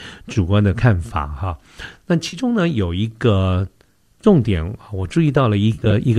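The decoder loses AAC frames and fills the gaps with concealment built from the last good spectrum. This AAC frame loss with concealment leaves short smeared, noisy patches in the speech at 0.33–0.38 s, 2.28–2.37 s and 4.21–4.25 s. From 5.74 to 5.92 s the losses are scattered, the longest run about 40 ms. The gap lengths fit roughly 10 ms frames, as in the likely low-delay AAC coding, whose compression is light.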